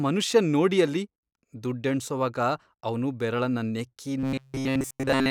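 From 4.19 s to 5.30 s the speech collapses into robotic sound from repeated short buffers: a rigid, metallic buzz at 133 Hz, likely from a roughly 7.5 ms block being looped throughout as new audio stalls. A spectrogram shows evenly spaced flat harmonics; the waveform repeats identically.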